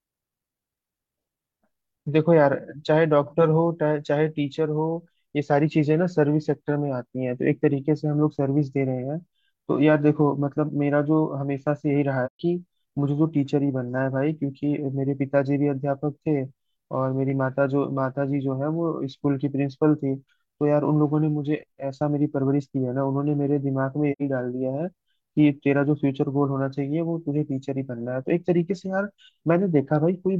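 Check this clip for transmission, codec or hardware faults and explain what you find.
Two short dropouts from AAC frame loss with muting, at 12.26–12.40 s and 24.12–24.21 s. The decoder zeroed the missing frames, so the overlapping windows fade the speech out and back in, leaving soft holes of about 130 ms and 85 ms. Those lengths fit roughly three and two lost frames.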